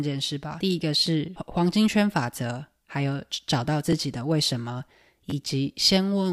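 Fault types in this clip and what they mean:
Repeated buffer: new audio arrived late, so the last block replayed. Here 10.7 ms pieces repeat, heard as brief clicks; one plays twice extra.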